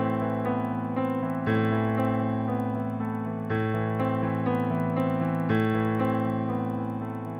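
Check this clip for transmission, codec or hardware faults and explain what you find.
One fault runs through the whole clip: the resampler restarted on every block. Each 50 ms block was converted from 24 kHz to 48 kHz on its own, so its edges lacked true neighbouring samples. That leaves a tick at every boundary, repeating at 20 Hz whenever sound is present.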